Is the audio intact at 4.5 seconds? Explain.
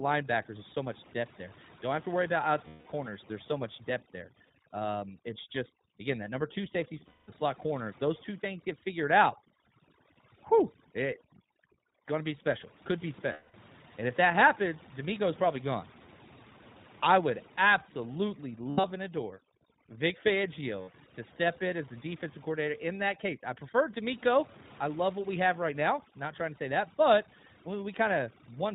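No. Right after "so much depth there", from 4.46 to 4.51 s, lost iLBC frames leave a gap of about 40 ms, consistent with two 20 ms frames going missing. The decoder fills it by repeating the last pitch cycle mixed with noise, so it sounds like a brief held, slightly buzzy vowel rather than a click or silent dropout. The voice is right again almost at once because each iLBC frame decodes independently.

That moment also carries the iLBC codec itself. Everything above 4 kHz is missing, and the speech has a plainly audible rough, synthetic edge from frame-by-frame coding of the excitation. This is a constant coloration across the clip, not a local event like the concealed gap.

Overdone noise removal is also present there. Frequency bands near the noise estimate are pushed far down, leaving a lowered background with twinkling specks. Those specks flicker irregularly, unlike the single held, slightly buzzy tone of the concealment.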